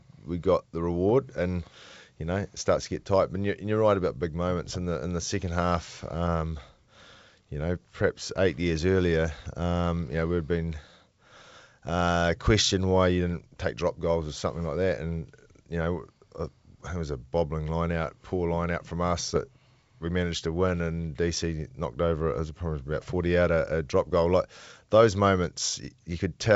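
Speech clip carried over a wideband G.722 link, clear up to around 7 kHz with only a faint upper-band hiss, and it has two spots of bit errors on an ADPCM link. There's a rough, poppy burst from 19.26 to 19.38 s and a short click at 24.13 s. Flipped bits knock the decoder's step size and predictor off track, so each hit rings on briefly as a rough burst with a brief level wobble. The error rate is low, around 0.15 percent for the first spot and 0.07 percent for the second.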